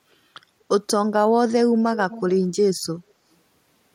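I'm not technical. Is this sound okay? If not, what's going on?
No. From 2.1 to 2.37 s there's an echo leak: a faint, separate repeat of the speech 226 ms later, not a smooth room-reverberation tail, likely from a loudspeaker.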